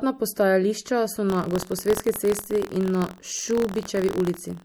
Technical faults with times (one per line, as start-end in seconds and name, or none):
0.00-4.65 MP3 compression
1.28-4.65 buffer tearing